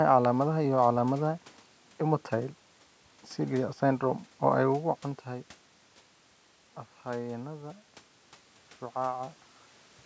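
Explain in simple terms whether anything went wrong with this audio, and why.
Nothing went wrong technically: the sound reaches up to about 8 kHz, as a call microphone's processing allows, the background is just the room, and the changes in loudness around 4.5 and 9.5 seconds come from the talker moving relative to the microphone, not from the equipment.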